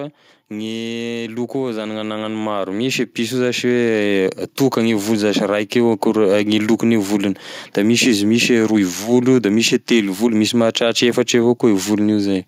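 Automatic gain rising affects this speech recording between 0.48 and 4.29 s: the gain control judged the incoming level too low and kept pushing its amplification upward, by about 10 dB in total, across nearly four seconds. Because the gain stage cannot tell voice from room, the talker and the background noise grow louder together in a slow, steady swell, so the opening is quieter and the level only settles once the control stops climbing.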